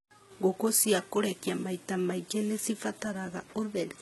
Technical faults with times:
0.00-4.02 HE-AAC compression

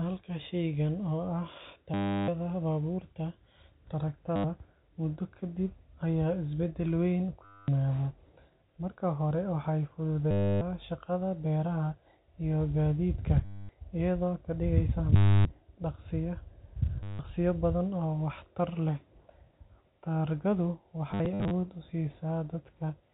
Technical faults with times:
1.94-2.28 packet loss with last packet repeated
4.36-4.44 packet loss with last packet repeated
7.45-7.68 packet loss with last packet repeated
10.31-10.61 packet loss with last packet repeated
13.45-13.69 packet loss with last packet repeated
15.16-15.45 packet loss with last packet repeated
17.03-17.19 packet loss with last packet repeated
21.11-21.51 packet loss with last packet repeated

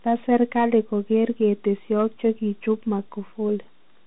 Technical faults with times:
0.00-4.06 Bluetooth CVSD headset codec

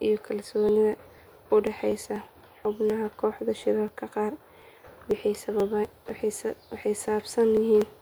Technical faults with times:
0.20-7.82 periodic USB or driver dropouts

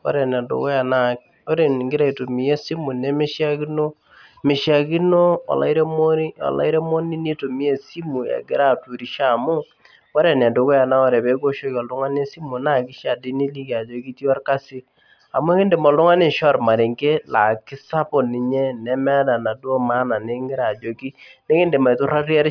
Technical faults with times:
none

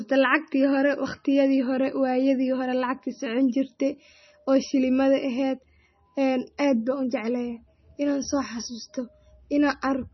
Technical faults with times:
0.00-10.14 MP3 compression

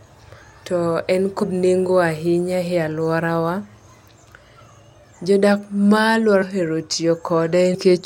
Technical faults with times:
1.42 compressed frames skipped
6.41 compressed frames skipped
7.73-7.75 compressed frames skipped

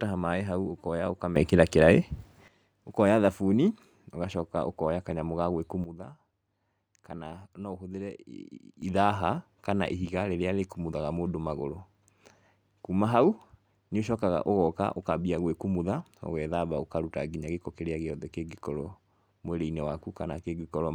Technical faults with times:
1.36-2.48 sudden gain jump
5.84-8.82 sudden gain jump

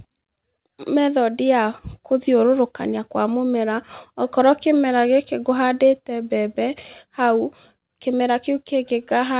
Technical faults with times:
none

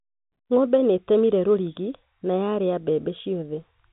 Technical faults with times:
none

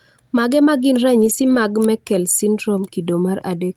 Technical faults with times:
1.21-1.55 lost packet rebuilt from error correction

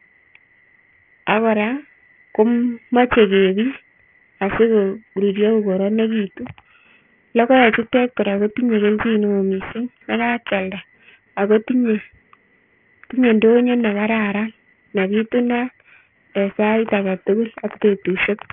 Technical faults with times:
0.00-18.53 aliasing

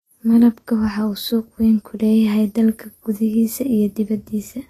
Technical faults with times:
0.00-4.69 Vorbis compression

